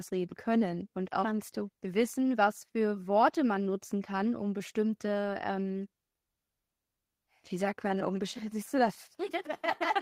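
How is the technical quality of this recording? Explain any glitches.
Nothing here stands out as a glitch; the recording runs steady and even, with no technical faults to point to.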